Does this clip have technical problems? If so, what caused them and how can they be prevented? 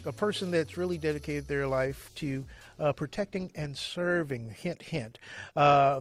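Yes: from 2.11 s to the end, an adaptive stream at a lower bitrate. Quality abruptly drops with codec artefacts and no gap, unlike a dropout, consistent with a drop from roughly 64 to 24 kbit/s. Prevent it with a steadier connection or a larger playback buffer.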